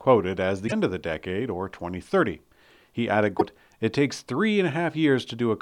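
Damaged data in the compressed stream of this speech clip leaves two stretches of bytes the decoder cannot read correctly. At each one it misinterprets or rejects the affected frames, loses synchronisation and hunts for the next valid frame header before normal playback resumes. The result is a short, unnatural chirp or blip that replaces the speech, first from 0.64 to 0.73 s, about 84 ms, and again from 3.36 to 3.42 s, about 58 ms.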